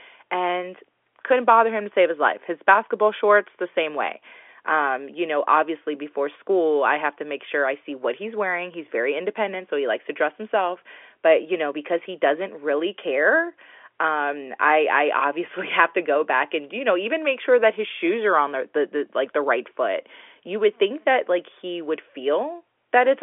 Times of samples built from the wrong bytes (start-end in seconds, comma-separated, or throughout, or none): none